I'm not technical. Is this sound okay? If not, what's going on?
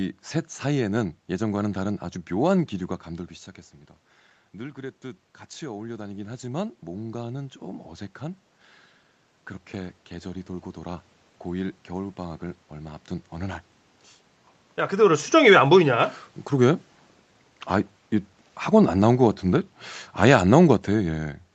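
No. Twice, the volume creeps up on its own. This is automatic gain rising. From 4.56 to 8.49 s, and again from 9.71 to 13.61 s, the voice and the room noise behind it slowly get louder together over several seconds. The call's automatic volume control heard quiet sound coming in and turned itself up. The first rise comes after the voice drops around 3 seconds, when the talker moves away from the microphone.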